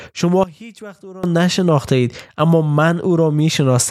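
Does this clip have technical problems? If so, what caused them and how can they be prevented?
Yes. From 0.44 to 1.24 s the speech drops by about 20 dB, leaving only a faint copy. This is likely one channel inverted: with one stereo side's polarity flipped, the content common to both sides cancels when summed to mono. Checking polarity on every cable, insert and plugin, and monitoring a mono fold-down while recording and mixing, would catch this before it reaches the file.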